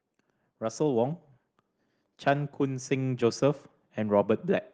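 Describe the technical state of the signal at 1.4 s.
At 1.4 s the speech signal is intact, with no audible fault at that moment.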